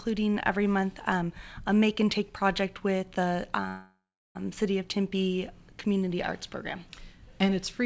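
Packets were likely held up in transit, so the jitter buffer ran empty from 3.68 to 4.37 s, causing a call audio freeze. The receiver stretches the last sound into a fading buzz or hiss that falls silent for about 0.36 s. The audio then resumes exactly where it stopped, with nothing lost, but 0.67 s late.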